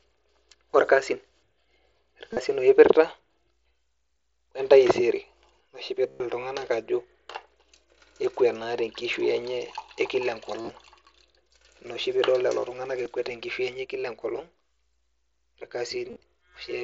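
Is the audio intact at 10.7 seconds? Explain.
No. Concealed Bluetooth headset packet loss spans 10.62 to 10.69 s. About 52 ms went missing across 75 ms, and the receiver filled the gaps by repeating recent waveform. It sounds briefly buzzy with a slight warble. The waveform shows identical repeated cycles, and the spectrogram shows flat harmonic stripes.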